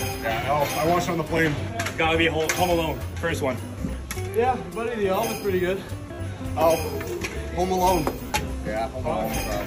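The audio catches three times: a brief glitch at 1.37 s, a buzzy machine-gun stutter from 6.14 to 6.19 s, and a shorter one from 8.27 to 8.30 s, each resuming slightly further along as if it had kept playing. This is Bluetooth stutter. The receiver repeated its last slice of audio while data was late or missing, covering about 14.5, 43.5 and 29 ms, which fits one, three and two lost packets.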